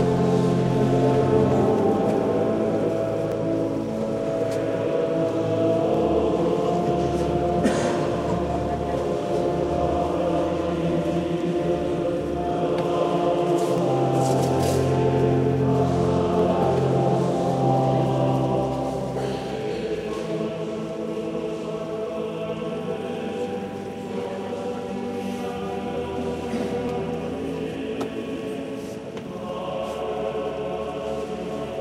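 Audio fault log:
0.71–29.49 s clock drift buffer slips: regular click every 2.62 s, about ten in all, likely two clocks about 150 ppm apart slipping a dozen-odd samples.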